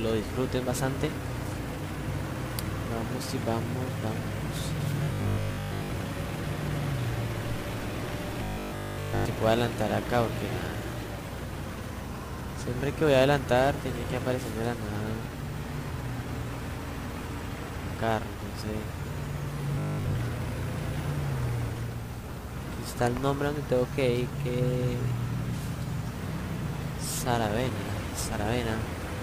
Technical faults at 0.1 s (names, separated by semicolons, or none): none